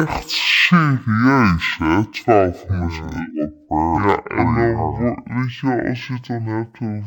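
From start to finish, this speech is affected by stereo read as mono. Left and right samples were taken one after another as a single channel. Everything plays at half speed and a full octave low. A faint mirrored copy sits high in the spectrum.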